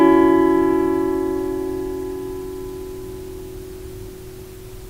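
No technical faults are audible.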